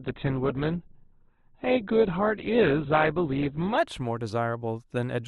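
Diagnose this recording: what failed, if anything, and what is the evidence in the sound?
The player opened the adaptive stream on a low-bitrate rendition and switched up only after gauging the connection, a network and playback-stage issue. From 0 to 3.78 s the speech has nothing above 4.5 kHz and heavier codec artefacts, fitting a low-rate Opus stream around 12 kbit/s, then clarity jumps abruptly without any gap.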